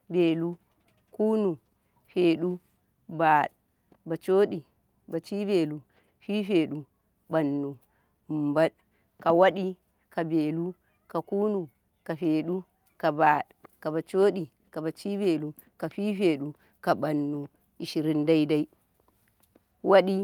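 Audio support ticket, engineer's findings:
No technical fault found on review of the speech clip. Nothing here to trace to a component or mechanism.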